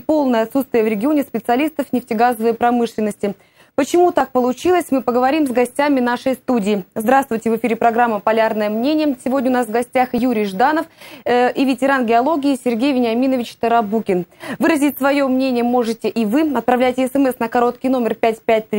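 At 4.21, 10.18 and 16.16 s the sound skips forward without silence, losing about 20 ms. This is likely audio missing between chunks, and its strict 6 s spacing sets it apart from random dropouts.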